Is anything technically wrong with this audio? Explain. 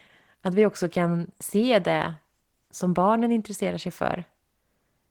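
Yes, two faults. Throughout, Opus voice compression at a low bitrate, which fits roughly 16 kbps in hybrid mode, codes the excitation coarsely, leaving the speech plainly muffled, hoarse and slightly robotic. From 1.74 to 2.02 s, just after "också kan", hard clipping occurs: peaks overdrive a stage by about 1 dB and are cut flat, adding high harmonics heard as brief crackle.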